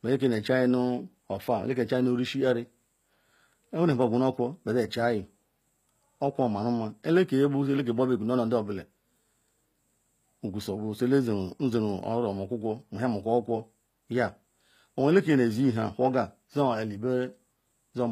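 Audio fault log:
Throughout, HE-AAC compression: the speech has a bright but synthetic top end, with s sounds turning gritty, metallic and lispy, and nothing at all above 15.4 kHz. This is likely HE-AAC v2 coding at a low rate, which fits roughly 24 kbps. Only the lower spectrum is truly coded; the treble is rebuilt by copying lower bands upward under a coarse envelope, so its harmonics fail to line up with those below the crossover.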